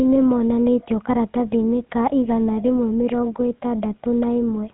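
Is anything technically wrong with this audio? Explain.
Yes. GSM full-rate codec damage runs through the whole clip. The speech has been pushed through the early mobile-phone coder, which models the vocal tract as a filter and excites it with a sparse, evenly spaced pulse train rather than the real waveform; the heavy data reduction fits a 13 kbps stream. That coarse excitation gives the speech a plainly audible buzzy, gravelly texture, and the band stops at about 3.9 kHz, so everything sounds narrow and dull.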